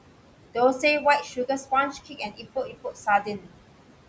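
Speech passes through a call's noise suppressor, which pulls the room noise down by about 18 dB and leaves it sinking between words and rising under them rather than steadily hissing like plain background noise. Noise suppressor speech cuts follow at 1.93–2.46 s, 2.66–3.07 s and 3.23–3.49 s, dipping the voice by about 13–14 dB for a few tenths of a second each time. The speech itself fades with the background, unlike a dropout's abrupt silence.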